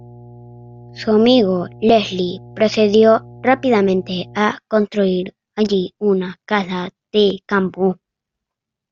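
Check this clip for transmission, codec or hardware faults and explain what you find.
There is one fault. From 0 to 4.38 s, ending just before "construir allí una casa", a ground loop or transformer couples the power line in as mains hum, a steady 60 Hz drone roughly 25 dB below the speech.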